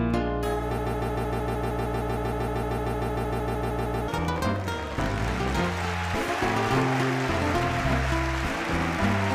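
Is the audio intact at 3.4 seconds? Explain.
No: 3.4 s sits inside a broken-record loop (0.78–4.08 s), where a 154 ms fragment repeats exactly 21 times, likely from a stalled player. Unlike echo, the repeats never fade.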